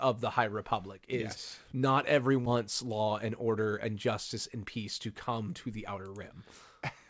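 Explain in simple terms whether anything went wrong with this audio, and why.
Two things went wrong, both close together in the speech.

At 2.46 s, right after "is yes not", there is a skip ahead. About 0.4 seconds of speech was thrown away, most likely because the receiving end had too much audio queued up. Playback then jumps straight to later speech with no silence in between. That is the difference from a dropout, which leaves an audible gap or a stretch of filler sound; here the two sides are simply stuck together, so part of the sentence just vanishes.

From 2.56 s to 3.68 s, ending just before "and justice and peace", there is a jitter buffer speed-up. The receiver was still trying to shrink its backlog, so it snipped out many tiny slices of the waveform, about a tenth of a second in total. The speech runs roughly 8% faster but keeps the same pitch. That unchanged pitch is what separates it from a tape-style speed change, where the voice would also rise and sound squeakier; here it just sounds briefly hurried.

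The call link carrying the audio cuts off everything above 8 kHz, which removes the very highest frequencies.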